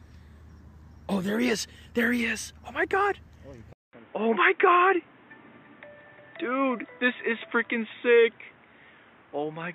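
The input likely switched to a poorer device at 3.73 s: after a 200 ms gap, the audio turns dull, with nothing above 3.8 kHz.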